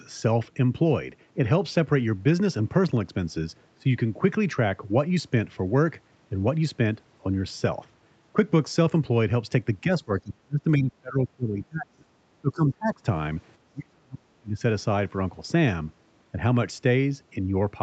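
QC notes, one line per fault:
9.81–12.09 s, 12.41–13.03 s and 13.72–14.62 s: speech suppressed in double talk. The speech sinks sharply, by roughly 20 to 40 dB at its deepest. This is likely an echo canceller that, with both ends talking at once, couldn't separate this talker from loudspeaker echo and turned both down.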